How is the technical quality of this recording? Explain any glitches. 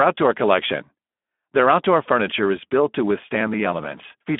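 The quality is poor. The speech runs through the Speex codec for the whole clip, and the compression damage is plainly audible. The encoder works at a low setting, which fits a bitrate around 11 kbps, so there are too few bits to rebuild the excitation. The sound comes out noisy and hoarse. The band is narrowed to telephone width, about 200 Hz to 3.5 kHz, with nothing above 3.8 kHz, so the speech sounds thin and muffled.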